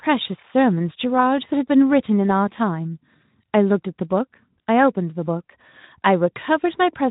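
A speech recording with nothing technically wrong with it.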